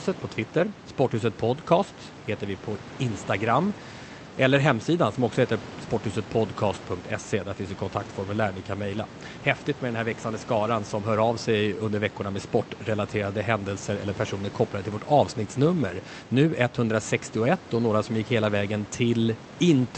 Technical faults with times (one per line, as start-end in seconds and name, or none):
none